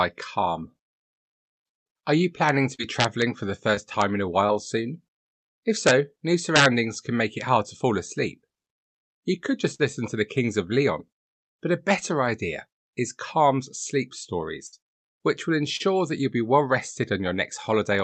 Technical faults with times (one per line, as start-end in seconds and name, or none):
1.77-1.87 burst of packet loss
2.75-2.80 short concealed packet loss
3.00-3.22 integer overflow
3.74-3.78 short concealed packet loss
4.01 integer overflow
4.46-4.50 short concealed packet loss
5.87-5.91 integer overflow
6.56-6.66 integer overflow
9.74-9.81 burst of packet loss
14.67-14.74 burst of packet loss
15.76-15.81 short concealed packet loss